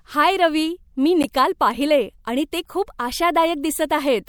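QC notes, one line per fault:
1.23–1.25 s, corrupt frame decoded: after "हाय रवी मी", damaged compressed data was decoded as-is, misplacing energy across roughly three frames, giving an error peaking near -10 dBFS.
2.41 s, corrupt frame decoded: between "पाहिले आणि" and "ते खूप", a couple of damaged frames were played anyway, producing a quieter, brief error around -15 dBFS.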